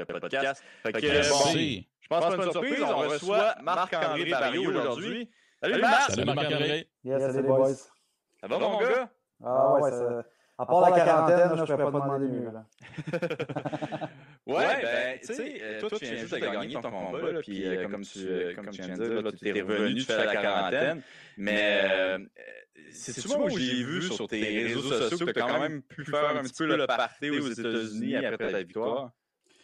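Throughout the clip, a channel delay (doubling) occurs: one channel runs about 92.88 ms late, which fits a 4096-sample buffer, and the mono sum makes every syllable sound doubled, like a slap echo.

From 28.44 to 28.49 s, lost LE Audio frames, likely within the LC3 Bluetooth link, leave a 45 ms gap that the decoder fills with a noisy, smeared copy of the preceding speech.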